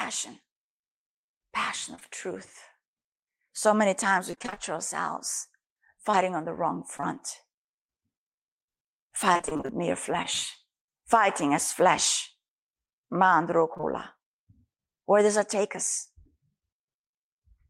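Right around 1.95 to 2.03 s there are two short concealed packet losses back to back, each about 20 ms missing. The receiver stretches the last bit of speech across the holes, so you get a quick smear. From 4.31 to 4.58 s it's repeated packet loss with robotic sound: seven gaps in quick succession and nearly half the stretch patched, so the speech goes choppy and robotic. Between 6.11 and 7.18 s you get scattered short gaps, roughly three of them at about 20 ms each. These are isolated hiccups and ticks, and the speech stays clear around them. The robotic repeated packet loss comes back from 9.33 to 10.26 s. It has ten gaps up to 31 ms, with about a quarter of the stretch concealed, which leaves a longer warble with bits dropping out. It comes back again briefly at 13.74 to 13.85 s, where three gaps cover nearly half that moment and it turns momentarily robotic.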